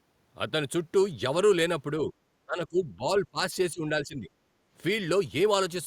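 A speech recording in which the talker is pushed down three times while the far side is also talking, from 2.46 to 3.08 s, 3.31 to 3.54 s and 3.72 to 4.29 s, by roughly 20, 25 and 10 dB. This is likely speech suppressed in double talk: the echo canceller mistakes the near voice for loudspeaker echo. Then, from 4.57 to 4.70 s, the background is gated by the echo canceller, with room sound briefly falling about 6 dB while the loudspeaker plays. It differs from a noise gate because it follows far-end playback, not the local level.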